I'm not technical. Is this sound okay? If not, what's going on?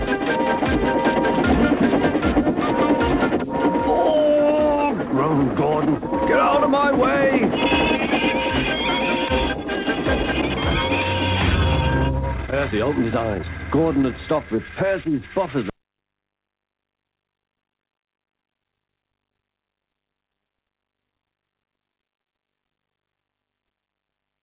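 No. From about 12.21 to 14.73 s, the sound suddenly runs fast, about 22 percent quicker, without going higher in pitch. That's a jitter buffer speed-up. When bits of audio arrive late and then pile up together, the receiving end catches up by snipping out lots of tiny slices, roughly half a second in total here. The result sounds hurried and rushed for those couple of seconds. Throughout the clip, the call line's top end stops at 4 kHz.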